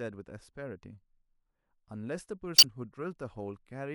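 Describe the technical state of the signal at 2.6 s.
Around 2.6 s there's damaged data in the compressed stream, from 2.55 to 2.65 s: the decoder misreads corrupt frames, loses sync and hunts for the next header, giving a brief glitch.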